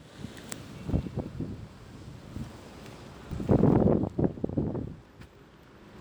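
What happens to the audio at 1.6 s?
Nothing goes wrong at 1.6 s; the audio plays through that moment intact, with no dropout, click or other fault.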